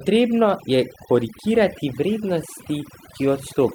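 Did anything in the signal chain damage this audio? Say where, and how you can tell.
Yes. Overdone noise removal at the processing stage runs throughout the speech: the gaps fall to near silence with twinkling specks. The reduction is gating individual bands near its noise estimate.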